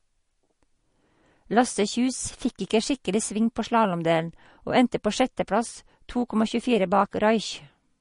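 Heavy MP3 compression at a low bitrate, likely around 40 kbps, runs through the whole of this speech recording. Nothing is left above about 10.6 kHz, and the thinned-out frequency content gives a plainly audible watery swirl, with chirpy, smeared s sounds.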